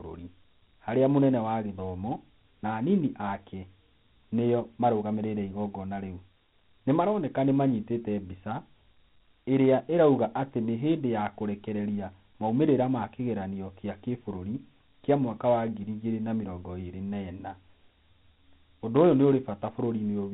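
From start to finish the speech carries Dialogic VOX ADPCM damage: a gritty, granular hiss rides on every syllable and swells with louder sounds. Each sample is stored as a 4-bit step relative to the last, so coarse quantisation noise follows the signal. Nothing sits above 3.9 kHz, a ceiling and grain that fit 4-bit OKI coding at about 32 kbps. Plain mu-law telephone audio has a similar band but a smoother, lower noise floor, without the clear grit.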